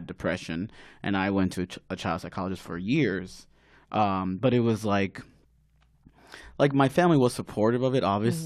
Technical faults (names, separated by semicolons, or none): none